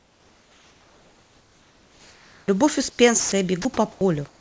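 From 0.00 to 2.48 s and again at 2.90–2.99 s, comfort noise replaces the background, likely because the sender stopped transmitting during pauses. The real background gives way to a steady, featureless hiss about 4 dB and then about 2 dB quieter. On a spectrogram it appears as smooth, even noise with no texture.

At 3.20–3.32 s and 3.62–3.65 s comes sound dropped by the voice detector, which likely mistook part of the sound for background. Brief stretches of sound vanish into noise, and the waveform shows sudden dips where the sound's energy is missing.

Comfort noise returns at 3.92–4.01 s, about 10 dB quieter, and at 4.28–4.40 s, about 3 dB quieter.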